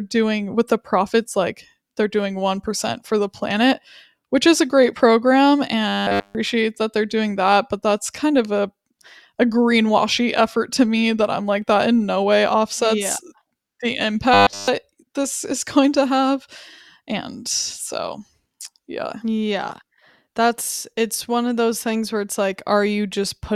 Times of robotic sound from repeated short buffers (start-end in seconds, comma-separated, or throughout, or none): 5.88-6.35, 14.34-14.68